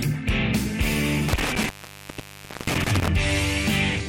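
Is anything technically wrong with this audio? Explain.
Yes. Between 1.28 s and 3.08 s there is an intermittent contact fault. A loose cable or plug in the signal path briefly loses its connection, and across that stretch the line is open for about 0.98 s in total. Each time the contact breaks or remakes, the metal surfaces scrape and produce crackle at the edges of the dropout. While the circuit is open the audio cuts out, leaving faint hiss.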